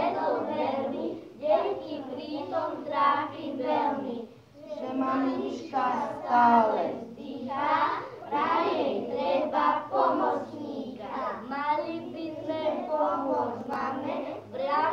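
From 13.61 to 13.81 s, processor overload crackle: the processor misses a run of buffer deadlines, around five buffers of roughly 10 ms, and skips the missing audio. The sound tears into a brief gritty crackle of hard-edged gaps, clearing once the load passes.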